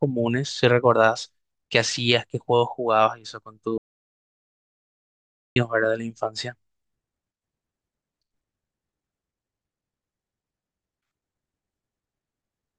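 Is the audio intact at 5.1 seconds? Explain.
No. At 5.1 s the speech is inside an audio dropout to silence running from 3.78 to 5.56 s, about 1.78 s of silence, likely from the input being lost while recording continued. The waveform flattens to a dead line, and the spectrogram goes completely blank.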